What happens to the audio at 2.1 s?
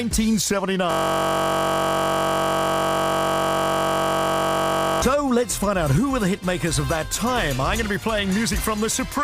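A system hang loop is under way at 2.1 s, running from 0.91 to 5.02 s. The playback system froze while the audio hardware kept replaying the same small ring buffer, so one 21.33 ms slice, which fits a 1024-sample buffer, repeats exactly over and over. Because the loop is so short, it recurs at 46.9 Hz and the sound becomes a steady, pitched buzz at that rate rather than a stutter.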